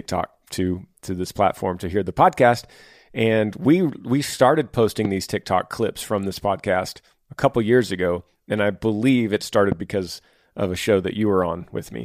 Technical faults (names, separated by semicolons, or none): loud pop